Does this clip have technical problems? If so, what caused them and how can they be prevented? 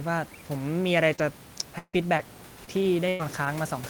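Yes. Repeated packet loss from 1.15 to 3.47 s left five gaps, the longest 153 ms, patched by extending the preceding sound, so the speech turns choppy and robotic. A steadier network connection, a larger jitter buffer, and forward error correction would prevent this.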